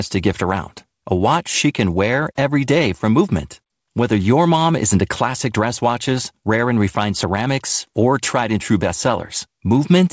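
The clip is speech carried over a call path whose audio stops at about 8 kHz, and nothing is technically wrong with it.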